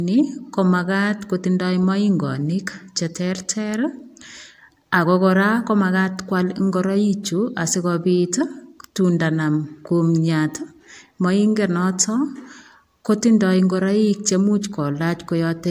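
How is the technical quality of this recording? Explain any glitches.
Nothing to flag here: I couldn't hear any glitches or technical faults anywhere in this recording.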